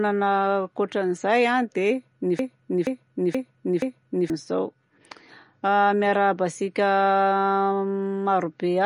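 Throughout the clip, the speech was likely squeezed through MP3 compression at a low bitrate, something around 40 kbps judging by the damage. Short of bits, the encoder drops everything above 10.6 kHz and discards weaker frequency detail that flickers in and out between frames. The result is a dull, band-limited top end with a watery, swirling texture, and s sounds come out metallic and chirpy.

From 2.39 s to 4.30 s, right after "ankoatran'izay a dia ny", the playback or stream likely stalled and kept resending the last fragment it held. That broken-record loop repeats a 0.48 s piece of audio exactly, four times back to back, so the same snippet stutters for nearly two seconds. Whatever should have been heard in that span is simply gone.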